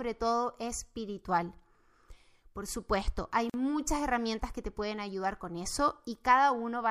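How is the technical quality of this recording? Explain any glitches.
There's one glitch worth flagging. At 3.50 to 3.54 s a gap at a join of encoded pieces drops about 43 ms of silence into the speech: two separately encoded chunks were butted together with their encoder delay and padding left in, so the sound cuts out and resumes where it stopped.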